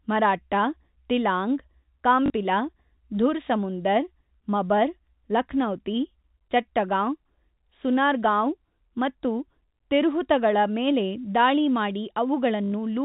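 Packet loss with the last packet repeated interrupts this speech at 2.26 s for 40 ms and at 12.64 s for 80 ms. The receiver replays the previous chunk to fill each gap, so the longer run buzzes robotically, consistent with 20 ms packets, within the narrow telephone band.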